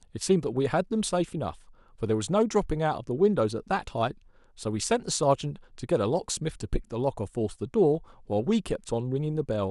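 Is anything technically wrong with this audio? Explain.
No, nothing technically wrong turns up anywhere in this speech recording, so there's nothing here to point to or fix.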